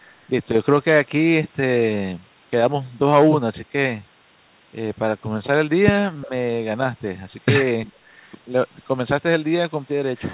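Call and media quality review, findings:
Speech suppressed in double talk: two ~70 ms dips of about 10 dB, 6.25–6.31 s and 7.85–7.92 s. Waveform shows brief envelope notches. Spectrogram shows momentary fading below the call path's 4 kHz ceiling. Likely the echo canceller attenuating near-end speech during far-end overlap.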